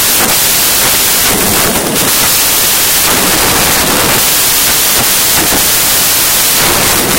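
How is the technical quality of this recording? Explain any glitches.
Poor: one fault runs through the whole recording. Samples built from the wrong bytes, from start to finish: each sample's bytes are combined misaligned or in swapped order, so the rapidly changing low bits dominate. The speech is overlaid with loud, harsh broadband noise, close to white on the louder sounds.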